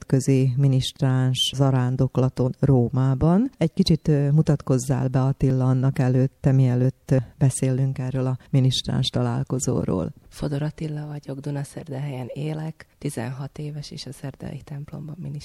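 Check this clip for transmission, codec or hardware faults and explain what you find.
Two faults stand out, each a brief discontinuity rather than a dropout into silence.

At 2.46 s, compressed frames are skipped. Around 50 ms of audio never plays because the decoder leaves out whole damaged or missing frames. The audio jumps ahead by the length of the frames left out. On a spectrogram it shows as a vertical break where the texture jumps.

At 5.50 s there is a small jump in the sound, roughly 10 ms gone. The likely cause is a dropped buffer from an overrun: samples were overwritten before being read, and the two sides were spliced directly. The waveform shows an abrupt step, and the spectrogram a thin full-band line.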